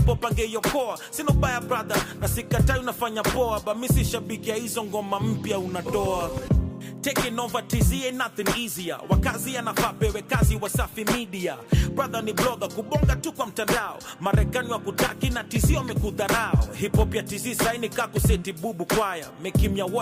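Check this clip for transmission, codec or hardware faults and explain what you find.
Nothing in the clip points to a transmission, codec or hardware fault.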